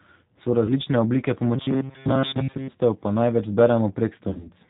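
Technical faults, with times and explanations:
Throughout, G.729 codec: speech is rebuilt at 8 kbit/s from a vocal tract filter, pitch predictor and sparse pulses, so nothing above 4 kHz passes and the sound is plainly rough and synthetic.
0.66 to 0.73 s, VoIP packet loss concealed by the speech codec: 20 ms of audio went missing, which fits one lost packet. The decoder stretched its last pitch and filter into a brief buzzy tone or coloured noise, and recovery lingers afterwards.
4.29 to 4.49 s, VoIP packet loss concealed by the speech codec: 100 ms was lost in gaps scattered over 160 ms, the longest 40 ms. Repeated extrapolation with falling gain gives a fading buzzy tone or coloured noise, and distortion persists after packets resume.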